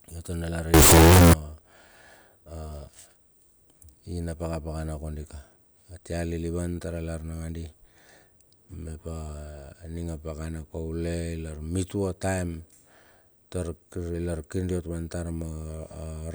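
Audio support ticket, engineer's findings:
Float read as integer, 0.74–1.33 s. Speech abruptly becomes a loud, harsh, near-square wave at a nearly fixed, high level; background noise as loud as speech; pitch still traceable. Likely a sample-format mismatch: 32-bit float data read as 32-bit integer, so sign and exponent bits set the level. Unlike overload clipping, the flat tops sit at a nearly fixed, high level and quiet passages are slammed just as hard.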